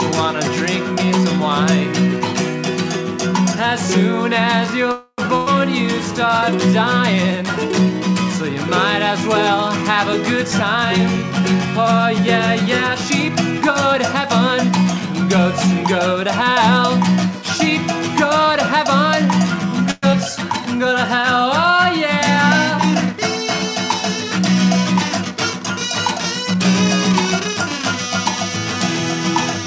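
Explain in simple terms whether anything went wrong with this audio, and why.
Several things went wrong, all typical of audio sent over a call connection.

Call audio freeze: at 4.92 to 5.20 s the sound stalls into a fading buzz or hiss, with a brief silence near the end, then carries on where it left off. The cause is likely packets held up on the way, so the receiver stretched the last sound for about a quarter of a second while it waited. The same freeze happens again, shorter, at 19.91 to 20.05 s, adding about 0.12 s of filler with nothing lost.

Burst of packet loss: at 5.36 to 5.48 s the sound turns into a brief held, fading tail. Then it resumes a little further on. Roughly 100 ms of audio never arrived, so the receiver papered over the hole and that piece is gone.

Skip ahead: at 20.13 to 20.15 s playback jumps forward with almost no gap. Something like 70 ms of audio is simply missing, because a stretch was dropped while later audio was already waiting, so the two sides are joined directly.

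Jitter buffer slow-down: from 20.36 to 20.94 s the sound drags slightly, at about 93% speed but the same pitch. The receiver was running short of stored audio, so it repeated tiny slices to add about 47 ms of reserve.

Jitter buffer speed-up: from 10.04 to 13.94 s the sound runs a little hurried, at about 106% speed with unchanged pitch. It happens again more gently, at about 102%, from 23.13 to 27.83 s. Too much audio had piled up waiting, so the receiver trimmed tiny slices, roughly a fifth of a second the first time and a tenth the second, to catch up.

The call path itself also leaves nothing above 8 kHz, which gives the sound a slightly muffled top.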